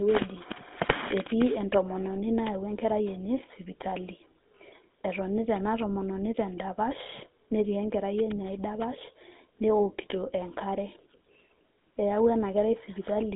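Throughout the speech, a GSM full-rate codec leaves a buzzy, gravelly roughness, consistent with the 13 kbps original GSM coder. Its regular-pulse excitation causes this grit. A clean narrowband telephone line confined to 200 Hz–3.6 kHz would sound muffled but smooth.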